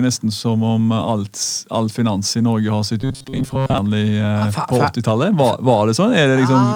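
From 3.02 to 3.78 s the speech takes on a robotic sound from repeated short buffers: a rigid, metallic buzz pitched at 134 Hz that follows the speech only loosely. The likely cause is audio arriving too slowly, so playback keeps looping the most recent fragment instead of advancing. A 134 Hz buzz fits a repeated segment of roughly 7.5 ms, and for most of the span, around 70 percent, the sound is repetition rather than new material.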